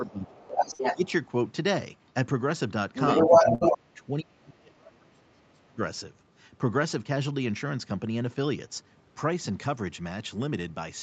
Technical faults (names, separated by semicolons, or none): speech suppressed in double talk; other side's voice leaking through; burst of packet loss